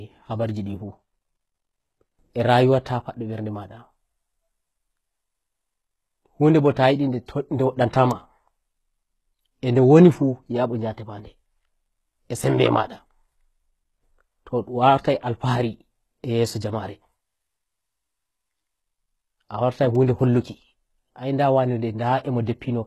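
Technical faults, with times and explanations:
Throughout: HE-AAC compression. The top end of the speech is bright but synthetic, with s sounds coming out gritty and metallic, and nothing at all above 12.3 kHz. This is likely low-rate HE-AAC, around 16 kbps by the plainly audible damage: only the lower spectrum is coded and the treble is copied up from it, so its harmonics don't line up. On a spectrogram, the upper band shows repeated blocky texture that stops flat at 12.3 kHz.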